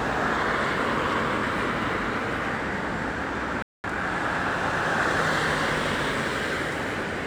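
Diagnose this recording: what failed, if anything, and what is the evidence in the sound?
At 3.62 s the sound cuts out mid-flow and the output sits in dead silence until 3.84 s, a gap of about 216 ms, before resuming. This is a playback stall at the buffer and playback stage. The gap is clean digital silence rather than a dropout with noise, so the cause is likely that the player's output buffer ran dry or its audio thread was held up, leaving nothing to send to the device for that fifth of a second.

Right after the gap, from 3.84 to 4.04 s, the sound rushes forward at roughly double speed without rising in pitch. This is time-compressed catch-up at the playback stage. To recover the delay built up during the stall, the player drops short slices of audio and cross-fades the joins. Running at 2.0x for 0.2 s cancels most of the lost time.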